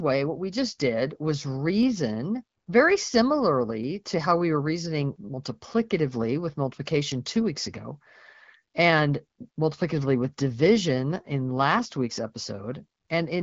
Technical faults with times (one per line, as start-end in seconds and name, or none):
1.83 dropped samples
3.84 dropped samples
10.50 dropped samples